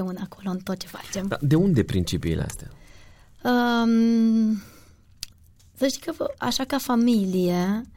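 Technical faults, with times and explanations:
Nothing technical goes wrong anywhere in this bit of speech, so there's no fault to list here.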